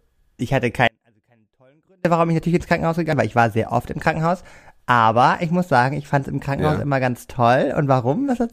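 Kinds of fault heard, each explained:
Audio dropout to a faint residue: The speech cuts out abruptly at 0.88 s and returns at 2.05 s, about 1.2 s later. The gap is not silent. A faint sound remains, roughly 40 dB down. This likely means the signal path broke while the chain after it stayed live.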